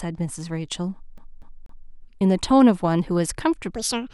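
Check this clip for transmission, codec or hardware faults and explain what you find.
Two faults are audible in this speech clip.

From 1.18 to 1.91 s, the CD is stuck on one turn: the laser jumps back repeatedly, replaying a 243 ms slice three times with brief mutes, a rapid mechanical stutter.

From 3.76 s to the end, a section plays at the wrong speed, likely from a mismatched clock: it runs 1.56 times too fast, pitching the voice roughly seven semitones higher and hurried.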